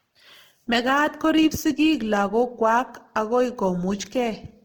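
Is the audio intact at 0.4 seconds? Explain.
No. At 0.4 seconds the speech carries Opus compression damage, present throughout the clip. The damage is plainly audible. Speech sounds rough, grainy and noisy rather than clean. It swirls less than MP3 damage would. The full bandwidth remains, with content up to about 20.3 kHz. The likely cause is an Opus encoder in its music mode, short of bits. It keeps each band's energy but fills detail with folded or noise content. The result fits a bitrate near 16 kbps.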